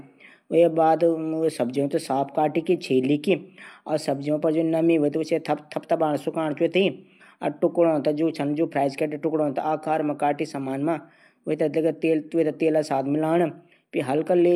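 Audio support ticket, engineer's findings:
Nothing stood out on listening to the speech; no findings to log against this ticket.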